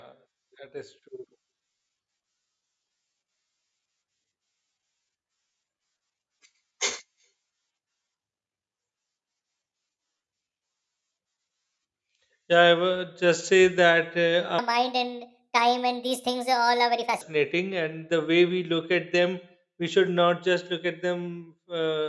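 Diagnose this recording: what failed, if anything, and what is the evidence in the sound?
From 14.59 s to 17.21 s, just before "and the", the speech runs 1.5 times fast and about 7 semitones high: a wrong sample rate at the playback stage, which fits 16 kHz samples clocked out at 24 kHz without conversion. Tempo and pitch rise together by the same ratio, which separates it from a pitch shift, where timing holds.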